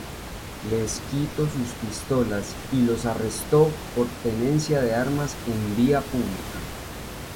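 No technical faults are audible.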